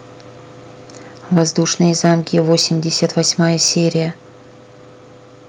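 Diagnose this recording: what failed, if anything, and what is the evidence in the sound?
At 1.38 s the speech drops suddenly by about 4 dB. This is a microphone volume stepped down, likely call processing cutting the input gain.

Microphone overload at the converter. Peaks flatten and crackle at 2.04–2.09, 2.37–2.62, 3.03–3.30 and 3.63–3.68 s, up to about 3 dB over. The likely cause is excessive input gain.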